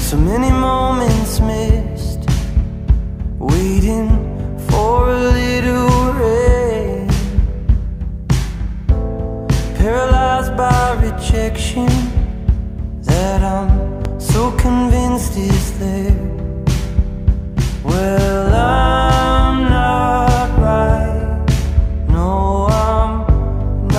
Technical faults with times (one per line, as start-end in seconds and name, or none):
14.05-14.08 loud pop